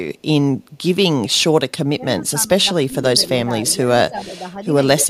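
The speech dips and thins in three places: deeply, by roughly 25 dB in parts, across 1.98 to 3.03 s; briefly, by about 10 dB, at 3.45 to 3.52 s; and mildly at 4.02 to 4.61 s. This is likely speech suppressed in double talk, where an echo canceller turns the talker down while the far side is also speaking. Within that last stretch, 4.17 to 4.32 s carries a faint copy of the voice trailing by 252 ms, around 20 dB below the speech. That is likely echo leak, meaning loudspeaker sound the canceller failed to remove and sent back.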